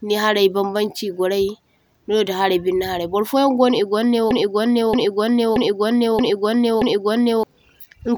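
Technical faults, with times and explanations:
4.31 to 7.43 s, broken-record loop: a 0.63 s piece of speech plays five times back to back, each repeat identical and undecayed, unlike an echo. The speech that should fill that span is lost, likely because a stalled stream kept resending its last fragment.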